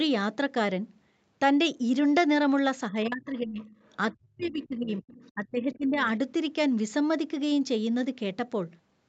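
From 2.9 to 3.65 s, both sides talking at once likely left the echo canceller unable to tell the local talker from loudspeaker echo, so it turned the speech down. This speech suppressed in double talk dips the voice by about 25 dB. From 3.86 to 3.96 s, the other side's voice leaks through faintly, about 40 dB under the speech, as echo the canceller likely did not fully remove. From 4.12 to 5.04 s, the suppression returns deeper, about 40 dB, gutting the talker while the other side's voice leaks again at 4.38 to 4.67 s and 4.88 to 5.32 s, now only about 25 dB down. From 5.34 to 6.05 s, a third suppression pulls the speech down by about 20 dB.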